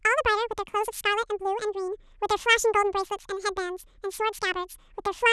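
From start to finish the speech has been read two samples at a time (double speed): pairs of samples were taken as one frame, so it plays twice as fast and 12 semitones higher. On a spectrogram the formants sit an octave up.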